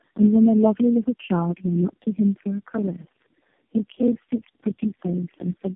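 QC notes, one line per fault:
throughout: tandem speech coding. The speech passes through narrowband AMR coding four times with G.711 links between, each pass re-coding the last one's damage, so it sounds rough, muffled and warbly. The spectrogram shows nothing above 3.4 kHz and smeared, unstable harmonics.
2.73–5.65 s: block size mismatch (padded). Short stretches of silence recur at 20.8 Hz, heard as a low buzz, and the audio runs at about 0.89 times speed with timbre unchanged, which fits 1024-sample blocks read as larger ones. The waveform shows evenly spaced flat gaps.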